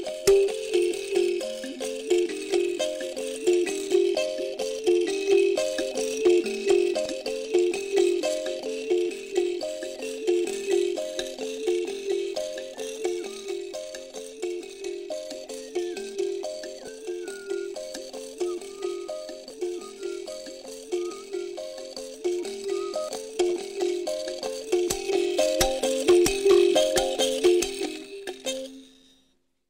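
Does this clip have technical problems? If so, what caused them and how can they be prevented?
Yes. Short chirps or blips break into the sound at 7.06 s, from 16.85 to 16.88 s, at 19.50 s and at 23.09 s. The one near 16.9 s lasts longer than the others, which are only a few milliseconds each. These come from damaged data in a compressed stream. A stretch of the encoded bytes was lost or corrupted, so the decoder misread those frames and lost sync. It produced garbage output until it found the next valid frame header. To prevent this, deliver the file over an error-checked transfer or container with checksums and verify its integrity before decoding.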